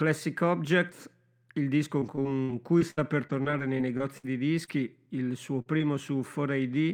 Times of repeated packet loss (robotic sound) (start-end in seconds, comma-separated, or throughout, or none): 1.99-4.25